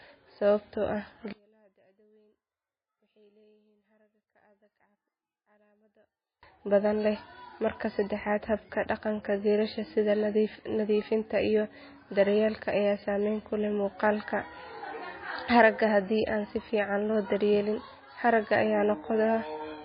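From start to finish, the speech has heavy codec damage. The likely cause is MP3 compression at a very low bitrate, which fits roughly 17 kbps. With so few bits, the encoder drops weak frequency lines. These lines flicker on and off between frames. The result is a watery, swirly texture, with metallic chirps on s sounds. Consonant attacks smear.

At 1.33 s, just after "sababtoo ah", the speech drops by about 37 dB and almost disappears. It stays that way until 6.43 s, just before "badan leh". The likely cause is one channel inverted in polarity. When the two channels were summed to mono, everything they shared cancelled out, background included. Only the small difference between them survives as a quiet residue.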